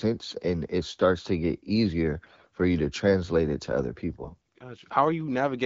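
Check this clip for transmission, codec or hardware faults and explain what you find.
There are two short bursts of AMR bit errors, from 2.22 to 2.47 s after "starts to get easier" and from 4.20 to 4.37 s after "translate it to other". Around one in ten of the weakly protected bits got flipped, so the pulses and fine pitch, gain and spectral values went wrong, and the speech turns hoarse and gargly there. The AMR-WB coding underneath sounds light, which fits a 12.65 kbit/s rate.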